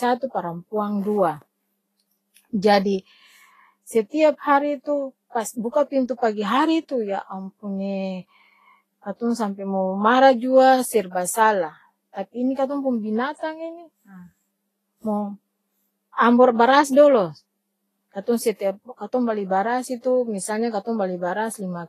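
Speech that sounds hissy and grainy from start to finish, with roughened tones and smeared consonant attacks, and nothing at all above 14.2 kHz. That's most likely Vorbis compression at a low setting, where coarsely quantised treble turns into noise, pointing to something around 28 kbps.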